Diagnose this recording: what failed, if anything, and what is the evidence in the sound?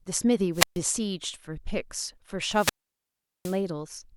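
Hiss rises, then near silence at 0.53–0.80 s (0.13 s mute) and 2.49–3.62 s (0.76 s mute): wireless microphone squelch dropout, the radio link fading until the receiver muted.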